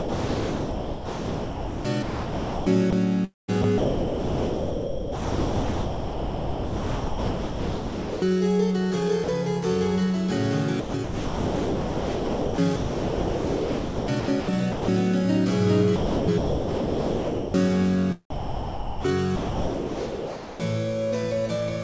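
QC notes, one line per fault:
0.00–2.93 s, 3.25–8.22 s, 10.80–14.88 s and 15.96–17.54 s, sound chopped by the voice detector: the sound repeatedly cuts to synthetic hiss, roughly 2.5, 4.7, 3.3 and 1.5 s of each stretch. This is likely the sender's detector toggling transmission, with comfort noise filling the gaps.
9.24–9.28 s, 18.30–19.04 s and 19.36–20.60 s, sound dropped by the voice detector: the sound gives way to steady noise for 40 ms, 0.74 s and about 1.2 s. This is likely because the detector judged it background, stopped sending, and the receiver played comfort noise in its place.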